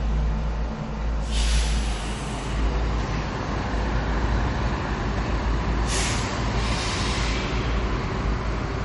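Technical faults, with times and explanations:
Throughout, MP3 compression: nothing reaches above 11.1 kHz, and the audio has a plainly audible watery, swirling texture. That points to a low bitrate near 44 kbps, likely starving the encoder. A spectrogram shows a hard ceiling and flickering, patchy upper bands.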